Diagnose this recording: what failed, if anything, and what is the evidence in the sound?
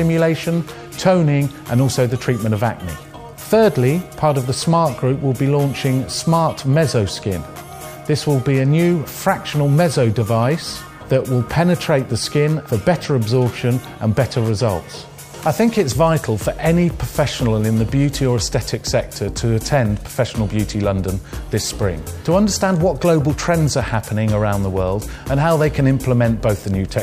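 Nothing failed here; there's no dropout, click, distortion or glitch anywhere in the recording, so there's no stage to point a finger at.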